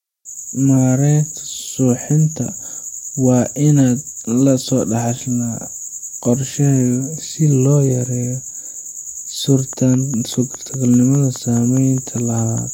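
From 9.73 to 12.59 s, a train of clicks ticks over the speech at a regular 4.9 per second, about fifteen in all, peaking near speech level. The likely cause is interference or a faulty connection or supply. Spectrograms show evenly spaced vertical lines; waveforms, repeated spikes.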